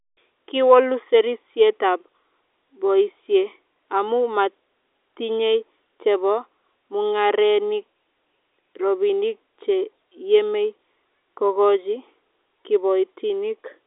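No technical faults are audible.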